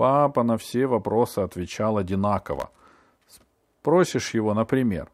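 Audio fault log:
2.53–2.81 s, processor overload crackle: a gritty, tearing burst as around twenty tiny buffers, each under a millisecond, miss their deadlines and fall silent with hard edges. Unlike a single dropout, the gaps form a dense run that ends when the load eases.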